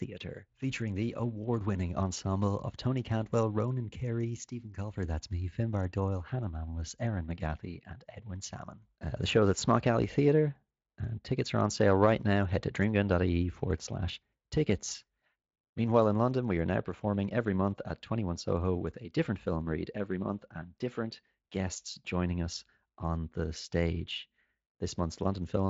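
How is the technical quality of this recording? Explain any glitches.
The recording has no glitches to explain: the speech reaches the listener through a Speex codec path at roughly 23.8 kbps, with no content above about 7.6 kHz.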